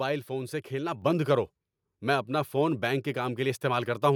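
At 1.02 s, the call software judged the microphone too quiet and stepped up its input volume in a single jump, a microphone volume step-up of about 4 dB. The speech and the background around it suddenly sound louder together.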